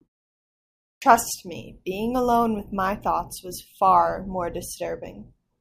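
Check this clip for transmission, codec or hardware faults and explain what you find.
One fault is audible: a clipped start after a pause. At 0.95 s, after nearly a second of silence from the beginning, the speech begins abruptly. About 68 ms is missing, up to 1.02 s. The output device likely dozed during the silence and needed time to wake. The first sounds are swallowed, so the onset lands without its attack.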